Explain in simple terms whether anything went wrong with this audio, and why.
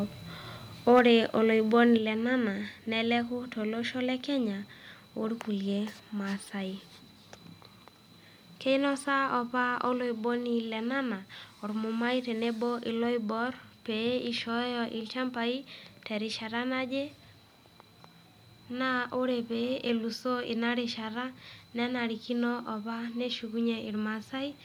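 The speech briefly turns harsh and crackly from 0.96 to 0.99 s, as if the loudest moment were torn at the edges. That is microphone overload: the input was likely set too high, so the tops of the strongest peaks were chopped off.

Right after, at 0.99 s, the whole sound, voice and background together, suddenly gets quieter, and it drops again at 1.98 s, this time by a larger step. This is the microphone volume being stepped down. The calling software probably reacted to the overload by turning the microphone's input level down in abrupt jumps.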